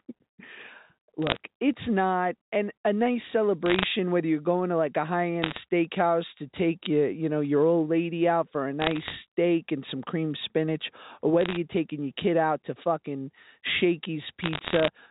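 Speech carried over a G.711 telephone line, with bursts of bit errors on the digital phone line at 1.22–1.37, 3.66–3.84, 5.42–5.58, 8.80–9.15, 11.41–11.57 and 14.43–14.88 s. The one at 3.66 s falls between "not and a nice" and "whether you're going to", and the one at 8.80 s falls between "lady out for a" and "and some cream spinach". Each burst, at an error rate of around 0.4 to 0.7 percent, is heard as crackle over speech that keeps running unchanged. Every flipped bit corrupts one sample, and hits on sign or high-order bits give sharp ticks. Packet loss would instead leave gaps or smeared repeats. The G.711 line itself passes nothing above 4 kHz and otherwise adds at most faint coding damage.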